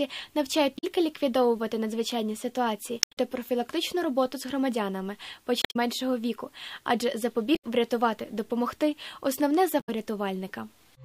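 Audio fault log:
0.75–0.84 s, 2.99–3.17 s, 5.59–5.76 s, 7.52–7.64 s and 9.77–9.89 s: damaged data in a compressed stream. Five brief glitches, heard as a chirp, squawk, click or short hole, each lasting roughly 0.1 to 0.18 s and spaced about two seconds apart. At each point the compressed bytes are corrupted, so the decoder misreads the affected frames, loses its place in the stream and emits garbled output until it locks onto the next valid frame header.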